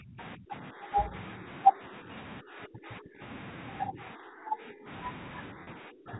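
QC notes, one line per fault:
0.00–0.19 s, 0.36–1.13 s, 1.67–2.08 s, 2.41–3.21 s, 3.86–4.88 s and 5.52–6.19 s, speech suppressed in double talk: the speech repeatedly dips, thins or breaks into pieces, sinking by about 25, 25, 10, 20, 15 and 30 dB at its deepest in these spans. The likely cause is the echo canceller mistaking the talker for loudspeaker echo while the far side was also speaking, and turning everything down together.
0.20–0.24 s, other side's voice leaking through: a faint scrap of a second voice slips in, about 20 dB below the main speech. This is likely the far side's audio, played on the talker's loudspeaker and picked up by the microphone, surviving because the echo canceller did not remove it completely.
5.64–5.67 s, packet loss with pitch repetition: a brief held, buzzy tone lasting 30 ms, buried inside the final suppressed stretch. The receiver bridged the missing audio by repeating the last pitch cycle, which fits a single lost packet. 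The gap was short enough that the repetition never faded to silence before normal speech resumed.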